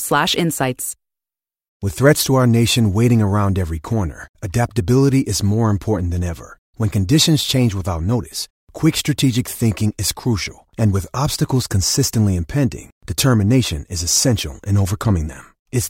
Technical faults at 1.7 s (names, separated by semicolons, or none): none